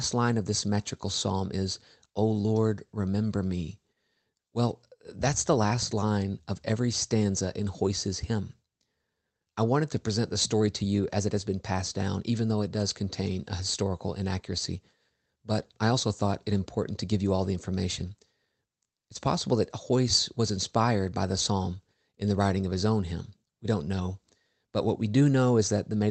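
All the way through, there's clock drift between sender and receiver. The sending end's clock runs fast, by around 4 percent, so audio arrives quicker than it's played out and the jitter buffer keeps filling. You get a faintly rushed, slightly unsteady feel rather than one obvious glitch.

Because of that, from about 0.15 s right up to 26.07 s you can hear repeated timing corrections. The receiver keeps trimming short slivers to catch up, all in the same direction but at uneven spacing, so the pace lands near 104 percent and you catch small hiccups here and there. The call path's Opus coding adds its usual coding noise on top, with the top end stopping at 8 kHz.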